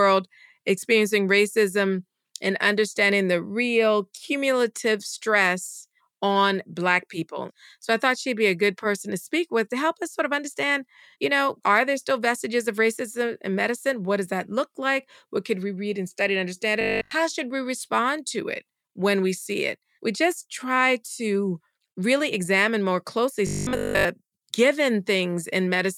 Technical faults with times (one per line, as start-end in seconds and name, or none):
16.81-17.11 robotic sound from repeated short buffers
23.47-24.05 robotic sound from repeated short buffers